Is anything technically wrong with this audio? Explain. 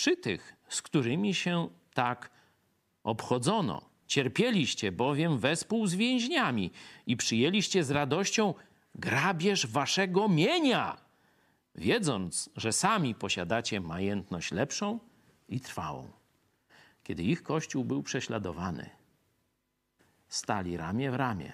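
Yes. This speech clip has two brief underruns with a held sample, at 3.75 s and 5.63 s. Each time, the output buffer ran empty and the converter froze on its last value. The waveform goes flat for about 0.73 ms, which fits a 32-sample gap. Because under a millisecond of live audio was lost meanwhile, the speech resumes at a different point. The flat stretch itself is nearly silent.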